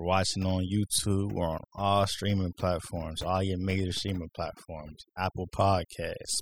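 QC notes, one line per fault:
Throughout: overdone noise removal. Heavy noise reduction cuts bands near the noise floor, so quiet speech detail vanishes, leaving twinkling near-silence.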